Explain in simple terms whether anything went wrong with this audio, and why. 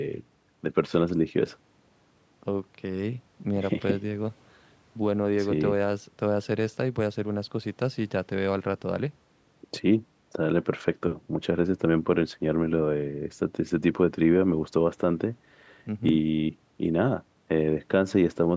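Nothing went wrong here: the speech just passed through a call's normal microphone processing, which trims off the very deepest bass and leaves nothing above about 8 kHz, and that's exactly what a call is supposed to do.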